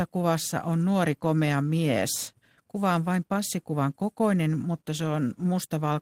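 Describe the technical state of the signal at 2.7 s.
At 2.7 s the speech signal is intact, with no audible dropout, distortion or other technical fault at that moment.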